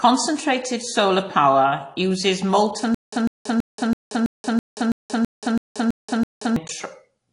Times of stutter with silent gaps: 2.94-6.56

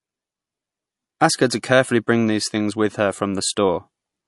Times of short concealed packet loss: none

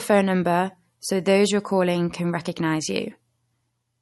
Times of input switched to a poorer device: none

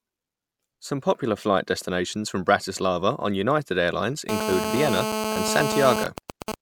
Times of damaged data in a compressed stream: none

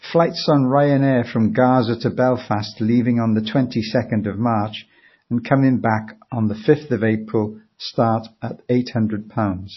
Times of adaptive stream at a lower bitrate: none

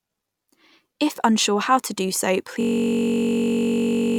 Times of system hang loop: 2.61-4.18

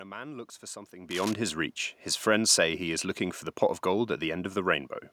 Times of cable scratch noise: 1.10-1.33

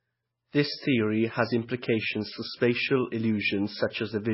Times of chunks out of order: none

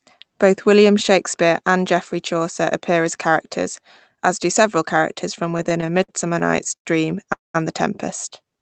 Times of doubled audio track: none

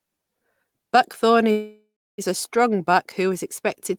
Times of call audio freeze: 1.51-2.21

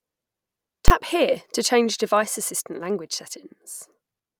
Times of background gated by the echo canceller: none

